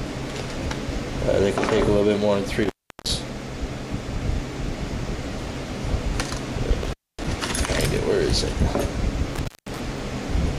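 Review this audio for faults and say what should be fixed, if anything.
There's an intermittent contact problem showing up three times: 2.63 to 3.11 s, 6.83 to 7.24 s, and 9.34 to 9.80 s. The line opens for about 360 ms, 254 ms and 188 ms respectively, so the sound drops out with crackle at each edge as the connection breaks and remakes, leaving just faint hiss in the gaps. To prevent it, swap out or reseat the suspect cable and plug, and strain-relieve it so it can't wiggle mid-take.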